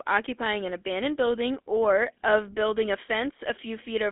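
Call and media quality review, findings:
GSM full-rate codec damage throughout the speech, plainly audible: buzzy, gravelly roughness on voiced sound. Line band 250 Hz to 3.6 kHz, nothing above 3.8 kHz. Probable component: GSM full-rate codec, consistent with a 13 kbps link. Mechanism: vocal-tract filter driven by regularly spaced pulses, only every third excitation sample kept; the coarse excitation produces the grit.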